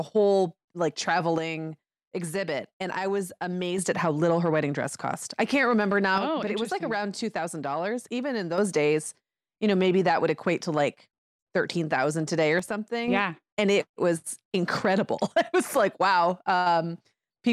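One channel drops out at 1.38–3.78 s after "whole like", 6.18–8.58 s after "cost I can't remember", and 12.59–13.08 s after "today or" in this speech clip. The level falls abruptly by about 6 dB each time, likely from a lost stereo channel in the mono sum.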